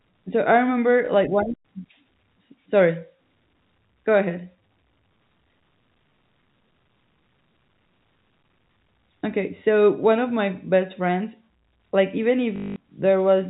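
At 1.06 s a single 20 ms stretch of the speech is replaced by a repeat of the audio just before it, a brief blip typical of packet loss with the last packet repeated. At 12.56 s the same fault runs 0.2 s, and the looped segment buzzes at about 50 Hz, which fits 20 ms packets. The repetition, not silence, separates this from a plain dropout. Through the G.711 telephone band, the buzz is heard as a robotic stutter.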